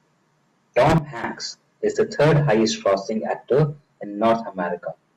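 At 0.98 s the speech and its background noise drop together by about 14 dB in a single step, staying low until 1.24 s, when both return abruptly to full level. This is a sudden gain jump, likely caused by a digital gain setting applied instantly with no ramp. On the waveform the envelope shows sharp vertical edges at both points. On the spectrogram every frequency band dims uniformly for that quarter-second, including the noise floor.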